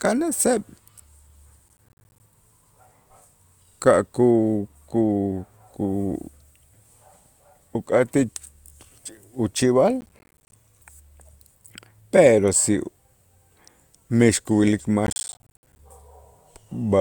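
Processor overload crackle appears at 1.68–2.2 s, 10.01–10.56 s and 15.07–15.79 s. Buffers of around 10 ms miss their deadlines and drop to silence, leaving dense hard-edged gaps. Unlike a single dropout, this is a gritty burst of many tiny gaps that stops once the load passes.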